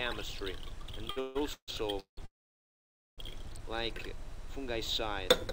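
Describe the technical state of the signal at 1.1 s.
Repeated stalls (stutter) run from 1.05 to 2.19 s: packets arrived late, the jitter buffer emptied six times, and the receiver stretched the last sound, so the audio drags and stutters.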